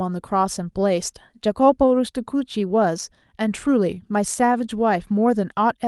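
A speech recording carried over a call link, its top end stopping around 12 kHz as a super-wideband codec would leave it. From 3.87 to 4.90 s the talker seems to slow down without any drop in pitch: sounds stretch out, the passage running at about 93% speed and gaining roughly 78 ms. This is a jitter buffer slow-down. With its reserve running thin, the receiver repeated individual pitch periods and bits of pause to rebuild its cushion.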